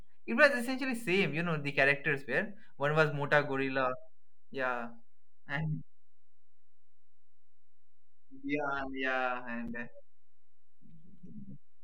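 A constant DC offset runs through the whole of this speech recording: the waveform sits shifted away from zero for its full length. It cannot be heard as such, but it eats into headroom and leaves steady energy at the very bottom of the spectrum. Separately encoded pieces were joined without trimming the encoder's start-up delay and final-frame padding, leaving a gap at a join of encoded pieces at 9.68 s. A gap of about 7.6 ms cuts into the continuous speech there, its edges smeared by the codec, before the sound resumes from where it stopped.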